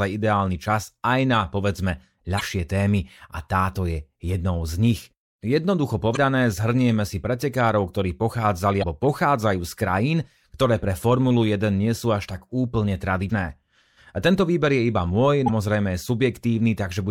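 Damaged data in a compressed stream produces brief disturbances at 2.37–2.41, 6.13–6.17, 8.79–8.84, 13.26–13.30 and 15.45–15.49 s. Corrupted frames break decoder sync until it finds the next frame header.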